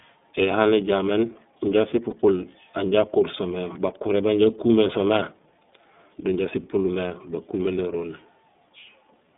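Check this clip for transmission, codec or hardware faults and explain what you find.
Two faults are present: iLBC codec coloration across the whole clip, and two short lost iLBC frames.

Throughout, the speech sits in a narrow band, roughly 150 Hz to 3.6 kHz. The iLBC codec rebuilds each block of excitation independently. That leaves the voice clear but plainly rough and synthetic. The damage fits iLBC's 30 ms mode, at about 13 kbps.

Lost iLBC frames occur at 2.10 s and at 7.08 s, just after "do inja sipulmé". Each gap lasts about 30 ms, consistent with one frame. The decoder fills it by repeating the last pitch cycle with added noise. It sounds like a brief buzzy, held vowel, and the voice recovers immediately.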